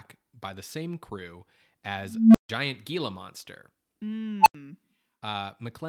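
After "by the same crew", an unstable filter at 2.03 to 2.49 s runs away on its own feedback. A low tone near 200 Hz swells over 0.32 s into clipping, then drops into 0.15 s of silence. The same fault recurs at 4.41 to 4.55 s, where a tone around 1 kHz builds in 54 ms before 85 ms of silence. On the waveform each looks like a flaring envelope that clips. On a spectrogram it is a single brightening horizontal line ending in a blank gap.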